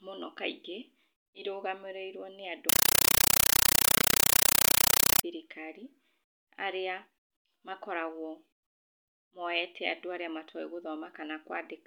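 Loud chattering static replaces the speech from 2.69 to 5.23 s, after "irũgamĩrĩirwo nĩ andũ". This is a compressed stream played as audio: undecoded AC-3 frames burst 31.25 times a second.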